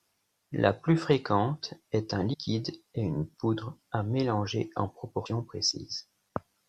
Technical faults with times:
2.32-2.35 damaged data in a compressed stream
5.25 damaged data in a compressed stream

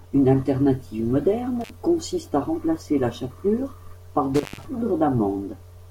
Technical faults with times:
1.61-1.70 intermittent contact
4.35-4.66 intermittent contact

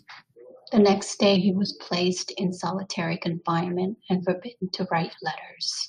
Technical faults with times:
1.36-1.89 drift correction step

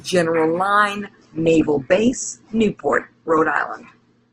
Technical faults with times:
0.99-4.32 adaptive stream at a lower bitrate

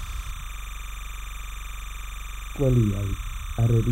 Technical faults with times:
0.00-3.92 timecode bleed
0.50-2.56 system hang loop

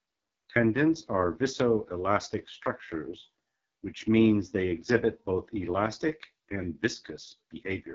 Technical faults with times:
0.00-7.94 AMR wideband (HD Voice) codec

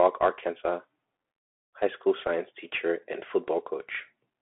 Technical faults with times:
0.00-4.42 Bluetooth CVSD headset codec

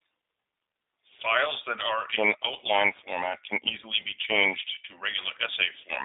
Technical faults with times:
0.00-6.05 G.729 codec

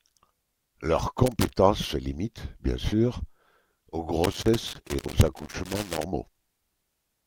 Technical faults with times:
1.26-1.57 loose connector crackle
4.24-6.04 loose connector crackle

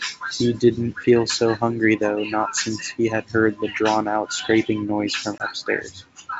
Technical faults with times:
5.38-5.45 packet loss on an ADPCM call

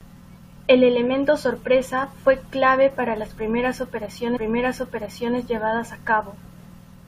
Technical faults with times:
4.35-5.35 stream segment repeated

